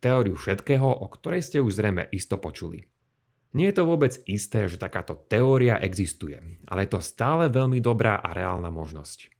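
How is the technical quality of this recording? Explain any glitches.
The technical quality of this recording shows no glitches to explain.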